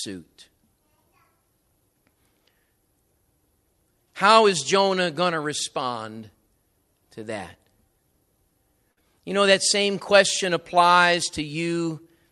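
A short stall from a late packet hits this speech at 8.91 to 9.03 s: the jitter buffer ran dry, so the receiver stretched the last sound by about 57 ms, nothing lost.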